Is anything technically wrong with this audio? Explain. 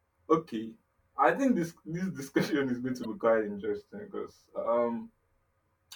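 Yes. At 3.01 to 3.05 s, right after "this discussion is going" and before "be quite interesting because", there is damaged data in a compressed stream. A short run of the encoded data is corrupt, so the decoder misreads those frames, loses sync and hunts for the next valid frame header before resuming. For about 40 ms the speech gives way to a brief glitch, and then playback picks up again.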